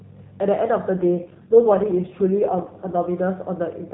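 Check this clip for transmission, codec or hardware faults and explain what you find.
One transmission fault: an AMR rate drop from 0.94 s to 3.08 s. The mobile link appears to have weakened, so the network moved the narrowband AMR codec from a rate near its 12.2 kbps top mode down to one that fits the 4.75 kbps mode, putting the bits into error protection. The speech keeps its telephone bandwidth with no gap, but it turns rougher, buzzier and more synthetic until the rate recovers.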